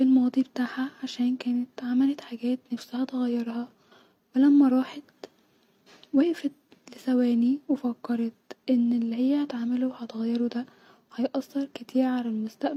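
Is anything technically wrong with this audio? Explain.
No, nothing is technically wrong with this audio. The speech shows no fault anywhere in the recording or its playback.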